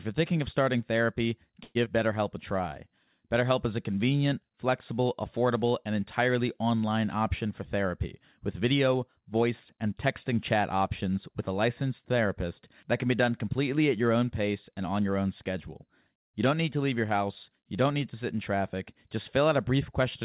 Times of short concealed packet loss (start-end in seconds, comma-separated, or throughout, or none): 1.85-1.88